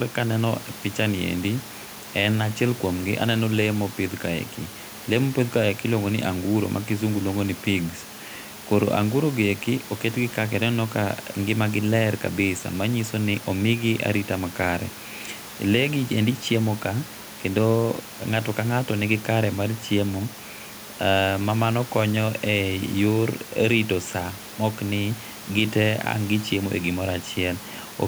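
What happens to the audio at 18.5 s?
Nothing goes wrong at 18.5 s: the audio is intact there, with only the room's background noise sitting about 20 dB below the speech.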